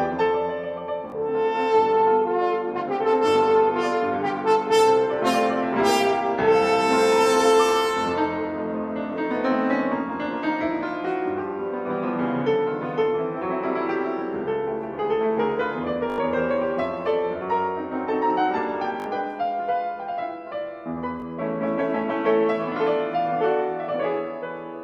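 A repeated buffer occurs four times: 1.10 to 1.12 s, 16.10 to 16.18 s, 19.00 to 19.06 s and 21.20 to 21.22 s. When fresh audio failed to arrive, the output replayed its last block, whose length fits a 20 ms buffer. The block repeats once at 1.10 and 21.20 s, four times at 16.10 s and three times at 19.00 s. With so small a buffer, each is heard as a click or brief buzz, skipping around 20 to 70 ms of sound. A waveform shows identical 20 ms segments side by side with abrupt joins, and a spectrogram shows thin vertical broadband lines at each seam.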